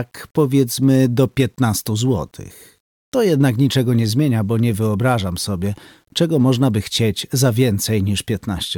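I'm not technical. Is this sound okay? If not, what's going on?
No. All the way through, the quieter parts have a fine, gritty roughness that shifts along with the sound, and the faintest moments sputter or go dead. That is likely low bit depth without dither: the audio was stored with too few steps, roughly 10 bits, and rounded without masking noise.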